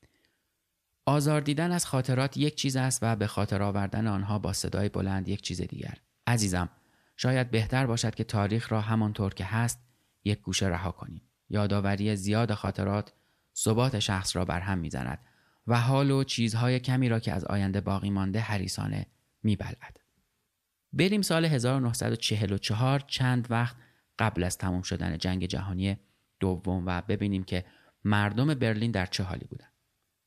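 At 12.61 s, weak DAB reception lets bit errors, at a rate of roughly a few tenths of a percent, slip past the error correction and corrupt the MP2 audio data. Damaged samples put short blips of noise in single sub-bands, and damaged scale factors make individual sub-bands leap in level for up to a frame. The result is brief DAB burbling up to 12.70 s, laid over the speech, whose length fits a run of about five corrupted frames.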